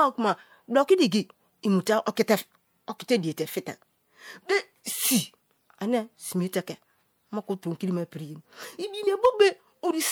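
A brief join at 9.06 s in this speech clip marks a small jump forward, with roughly a twentieth of a second of audio missing. This is compressed frames skipped: whole frames were not played, and a gap of about two frames fits a 24 ms frame length.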